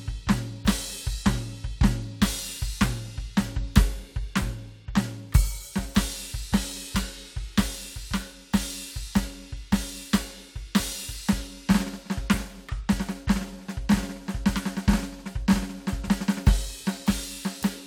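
The music signal carries no audible technical faults at any point.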